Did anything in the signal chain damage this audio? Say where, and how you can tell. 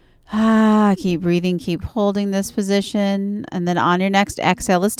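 No, nothing in this speech recording stood out on listening as a sign of damage from any stage of the signal chain.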